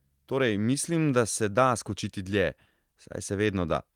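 No technical faults can be heard in this speech recording. There is no moment in it that calls for comment.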